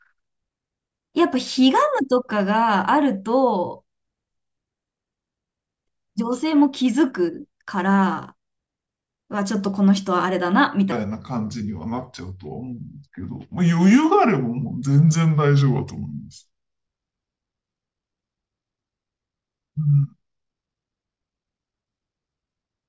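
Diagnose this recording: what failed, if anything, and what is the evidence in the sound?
A wrong sample rate at the playback stage. From 10.92 s to the end the speech drops to about 0.73 of its original speed and falls roughly 5.5 semitones in pitch, with tempo and pitch shifting together. That locked pairing means the samples were clocked out slower than they were captured, with no rate conversion. The ratio fits audio recorded at 22 kHz but played back at 16 kHz.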